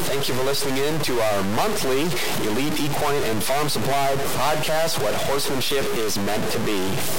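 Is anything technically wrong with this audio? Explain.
Yes. Throughout the speech there is buzzy distortion riding on the signal, and the gaps between phrases fill with noise instead of falling quiet. This fits a stuck bit, likely a single data line or converter bit held fixed. About half the sample values come out wrong by that bit's weight, a step of roughly -20 dBFS, so the error follows the waveform's shape. Because that bit also flips with the sign of small values, the pauses carry noise too.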